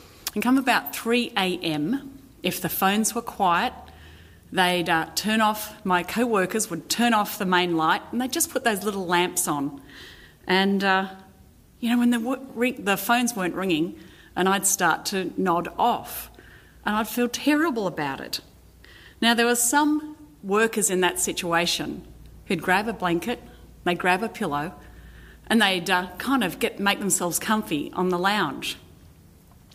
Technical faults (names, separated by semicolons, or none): none